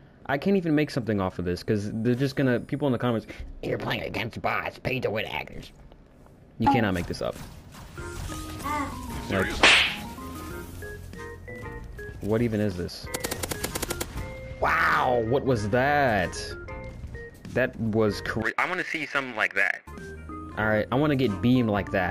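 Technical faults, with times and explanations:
No technical faults can be heard in this clip.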